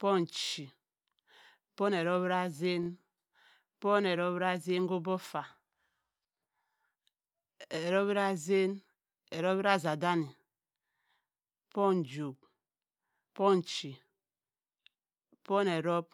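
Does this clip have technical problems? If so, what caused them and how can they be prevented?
Yes. A repeated buffer occurs at 0.44 to 0.53 s and at 2.83 to 2.88 s. One slice of about 23 ms, which fits a 1024-sample buffer, replays four times, then twice, with hard joins. It sounds like a short stutter. A larger buffer or higher playback priority prevents this.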